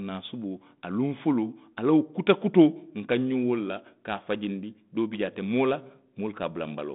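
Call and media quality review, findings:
No faults found; the G.726 path at 32 kbit/s carries the speech within its 150 Hz to 3.7 kHz telephone band.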